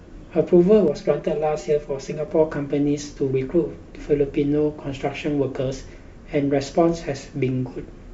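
From 0.88 to 2.28 s speech sounds hollow, phasey: channel delay comb filtering, one channel about 5 ms late, notching from around 100 Hz upward.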